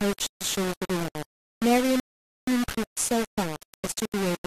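Throughout, the speech is gritty, likely from low bit depth without dither at 4 bits: the waveform is stair-stepped, and grainy hash follows the speech on the spectrogram. From 2.00 to 2.47 s, a rebuffering stall inserts 475 ms of silence, a blank gap on both displays, before the speech resumes where it stopped.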